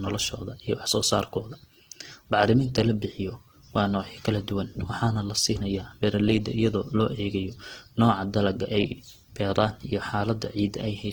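From start to end, the speech carries plainly audible Opus compression damage, likely from encoding at a low bitrate, with the texture pointing to the music (CELT) mode at around 16 kbps. The bandwidth stays full, reaching about 20.1 kHz. With too few bits, the encoder keeps each band's energy but fills the detail with folded or noise-like content, so tonal parts of the speech sound rough, grainy and noisy rather than swirly or hollow.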